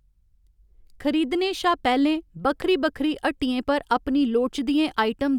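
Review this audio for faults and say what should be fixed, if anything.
A loud pop at 2.62 to 2.64 s, a single sharp spike about 10 dB above the speech, is likely a voltage transient from a plug, switch or static discharge. Prevent it by securing connections, grounding equipment and avoiding switching during recording.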